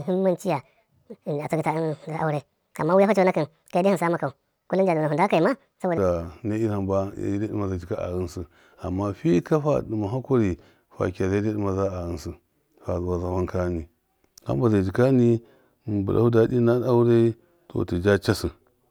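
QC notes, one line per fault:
0.00–5.98 s, section at the wrong speed: playback likely ran against the wrong clock, so this stretch of speech moves 1.63 times too fast, lifting pitch by roughly ten semitones and making the voice sound high, thin and hurried until normal speed returns.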